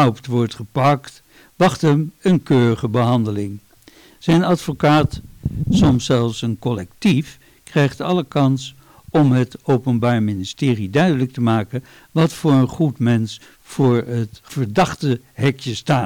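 Hard clipping runs through the whole clip: the signal is driven about 13 dB past what the stage can pass, so roughly one sample in twenty-five hits the ceiling and is cut flat, adding high harmonics heard as harsh fuzz on every loud moment.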